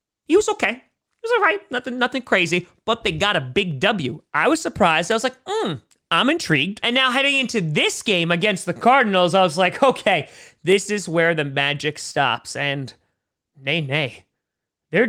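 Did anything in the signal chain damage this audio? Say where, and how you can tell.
Yes, at the driver or buffer stage. From 0.90 s to 14.92 s there's a click roughly every 1.4 s, around ten of them, with the steady spacing you'd expect from clock drift buffer slips. It's likely two devices on separate clocks, off by something like 100 ppm, so the buffer between them creeps until a few samples get dropped or repeated. Each slip cuts into the speech as a tick.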